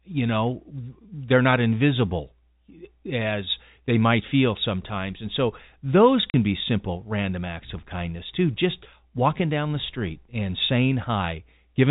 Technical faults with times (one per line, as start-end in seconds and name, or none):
6.30-6.34 packet loss filled with silence